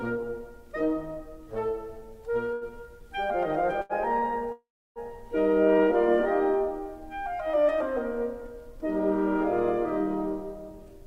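Late packets left the jitter buffer empty three times, causing a short stall from a late packet at 2.53–2.64 s, 3.81–3.92 s and 4.19–4.25 s. Each holds the music for about 80, 81 and 26 ms, then resumes from the same point. At 4.52–4.99 s a call audio freeze, likely from packets held up in transit, extends the last sound as a fading buzz before roughly 0.3 s of silence, adding a 437 ms gap.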